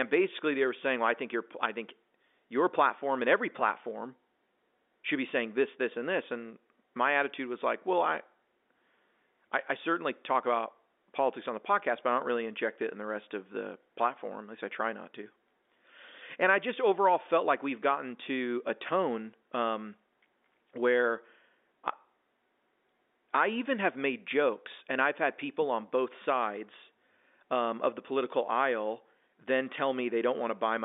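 No technical faults are present.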